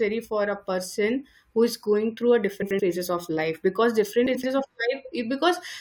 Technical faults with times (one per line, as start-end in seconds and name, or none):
2.62-2.80 frames out of order
4.26-4.44 frames out of order